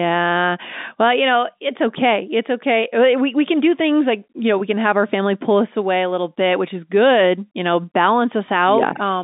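Nothing's wrong here: it's speech carried over an ordinary G.711 telephone line, so it has that narrow phone-band quality, roughly 200 Hz up to 3.7 kHz, which is just how the line works.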